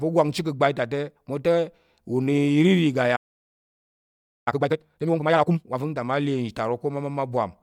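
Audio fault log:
3.16–4.48 s, playback stall: the player most likely ran short of buffered data or had its output thread blocked, so nothing reached the output for about 1.3 s. The speech cuts off mid-flow into silence, then resumes.
4.48–5.78 s, time-compressed catch-up: to clear the backlog the stall left, the player drops small slices and cross-fades the joins, running at twice normal speed. The speech sounds hurried but keeps its normal pitch.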